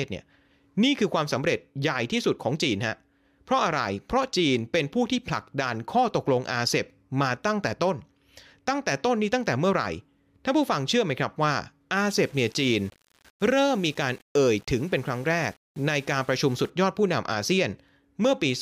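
From about 12.0 s to 16.7 s the speech goes grainy, with a rough, buzzy distortion that clings to the voice and shifts as it moves, getting harsher on the quieter stretches. That's the signature of low bit depth without dither. The audio was likely rounded to something like 7 bits with no dither, so the rounding error tracks the signal instead of becoming a smooth hiss, and it sits only roughly 30 dB below the speech.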